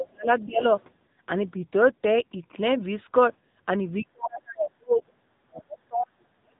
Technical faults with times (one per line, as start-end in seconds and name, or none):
0.00-6.59 AMR narrowband mobile codec
0.00-0.28 speech suppressed in double talk
5.06-5.12 other side's voice leaking through